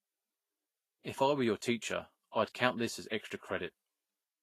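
Right through the speech there's plainly audible Vorbis compression, most likely at a low bitrate around 31 kbps: nothing above 14.2 kHz, and a hissy, grainy treble.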